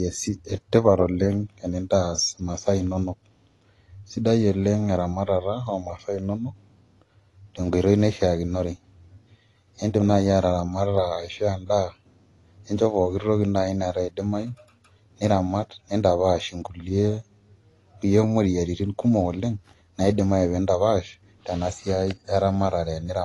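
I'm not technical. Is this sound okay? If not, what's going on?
No. Throughout the speech, nothing reaches above 11.5 kHz, so it sounds dull, with a fizzy, warbling smear on hissy sounds. That points to AAC compression, likely squeezed hard. Unlike a plain treble cut, the swirly texture gives it away.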